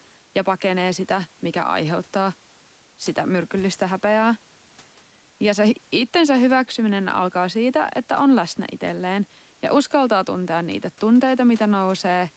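Gain pumping runs through the whole of this speech recording: the gain swings by around 5 dB, so quiet and loud passages sit unnaturally close in level and the speech sounds squashed. The likely cause is input gain set far too high, with a fast limiter or compressor clamping down on each loud syllable and releasing in the gaps. The sound stays band-limited to 8 kHz, and the room noise sits about 36 dB below the speech.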